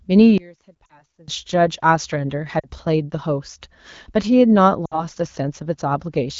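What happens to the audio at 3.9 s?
Nothing goes wrong at 3.9 s; the speech there comes through intact, carried by the AMR wideband (HD Voice) codec at 12.65 kbit/s with only the light coding character expected at that rate.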